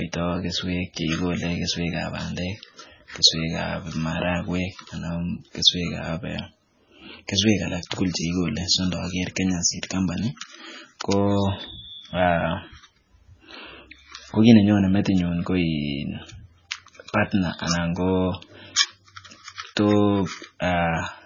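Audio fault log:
Throughout: low-bitrate audio saved at a high bitrate. The spectrogram shows a flat ceiling at 7.1 kHz that muffles the speech, likely from a very low-bitrate MP3 re-encoded higher.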